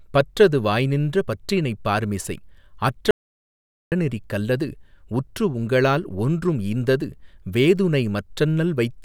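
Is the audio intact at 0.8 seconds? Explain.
Yes, at 0.8 seconds the speech runs intact, with no audible fault at that moment.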